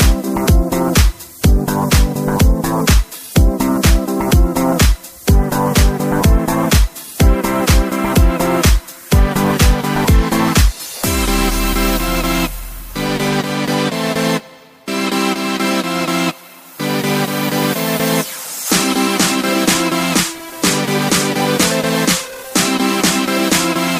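Nothing in this recording jumps out as a technical fault; it runs along without any dropouts, glitches or other trouble catching the ear.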